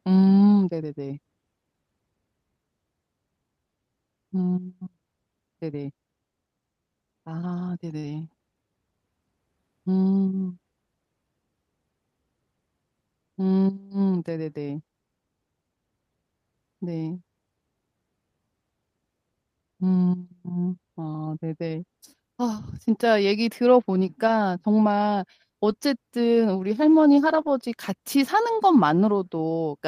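Speech over what sounds like an Opus call, with the top end stopping around 12 kHz. One problem is a short concealed packet loss at 7.99 to 8.05 s, where about 40 ms went missing and the decoder stretched the preceding sound over the hole, so you get a brief smear. There are also six spots of lost packets rebuilt from error correction: 4.37 to 4.39 s, 8.03 to 8.09 s, 21.71 to 21.73 s, 24.27 to 24.33 s, 25.69 to 25.71 s, and the longest, 27.29 to 27.47 s, roughly 100 ms of rebuilt audio. In each, the decoder played the lower-quality backup copy carried in the next packet, so nothing drops out, but those moments turn grainier and noisier.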